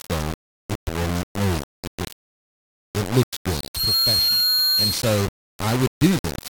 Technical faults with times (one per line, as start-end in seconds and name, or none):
0.00-6.51 low bit depth without dither
3.48-5.30 loudspeaker feedback squeal